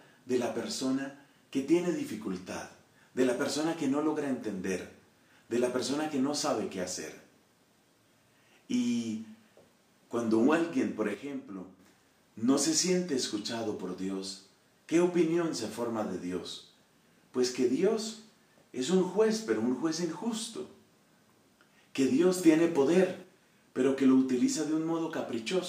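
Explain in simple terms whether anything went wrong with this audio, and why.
Twice the whole sound changes volume in an instant. From 11.15 to 11.79 s it drops noticeably quieter, and from 22.38 to 23.24 s it jumps clearly louder, with the background noise moving along with it each time. This is a sudden gain jump. The likely cause is a volume setting applied all at once, from one sample to the next, instead of being faded in smoothly.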